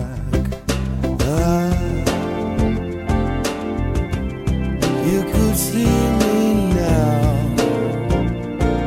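No technical faults are audible.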